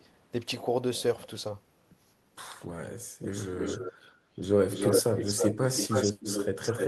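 A speech recording with a delayed second copy of the talker trailing the original by about 313 ms, heard from 3.56 to 3.93 s, 4.7 to 5.55 s, and 5.77 s to the end. This is echo leak, likely from a far end on loudspeaker whose echo canceller failed to remove the pickup. The copy sits a few dB below the speech in the first and last stretches and rises to roughly equal level in the middle one.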